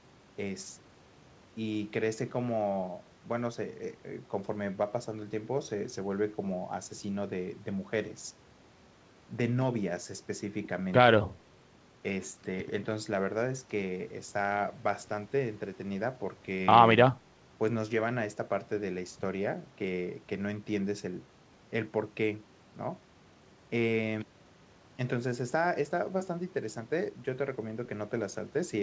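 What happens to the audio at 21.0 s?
Nothing goes wrong at 21.0 s: the speech continues intact through that moment, carried as before by the call path's wideband coding with its usual cut-off at 8 kHz.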